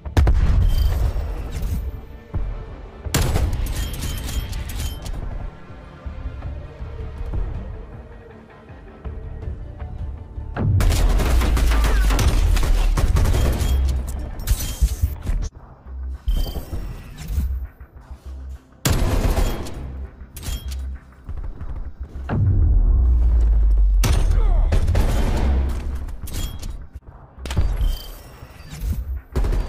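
Listening closely, nothing in the audio stood out as a technical problem.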